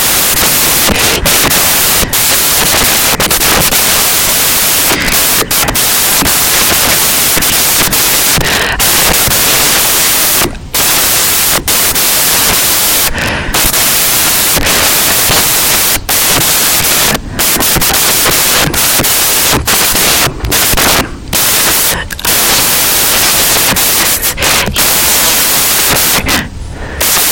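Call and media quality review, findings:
Samples built from the wrong bytes, whole clip. Symptom: loud broadband white noise over the speech. Component: PCM reader or decoder. Mechanism: byte order swapped or read off by one byte, so fast-changing low bits dominate each sample.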